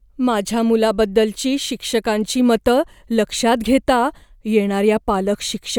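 No faults turn up anywhere in this speech recording, so there's nothing to point to along the way.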